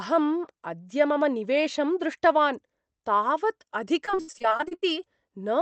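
Right after "मम निवेशं दृष्टवान् तावत्", from 4.05 to 4.84 s, repeated packet loss (robotic sound) sets in. Packets keep going missing. Each hole is bridged by stretching the last sound. About 41% of the span is patched, and the longest gap is 79 ms. It turns choppy, with pieces missing.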